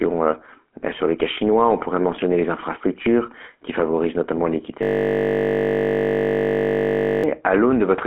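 From start to finish the speech has a buzzy, gravelly roughness, with nothing above about 3.8 kHz and a telephone-like band of roughly 250 Hz to 3.4 kHz. This is the GSM full-rate codec, consistent with a 13 kbps coder, rebuilding the voice from a vocal-tract model driven by sparse, regularly spaced pulses.

Right after "qui favorisent notamment l'équité", from 4.83 s to 7.24 s, the speech gives way to a steady 50 Hz buzz. This is a system hang loop: the computer or driver froze while the audio hardware kept replaying the same 20 ms buffer for about 2.4 s.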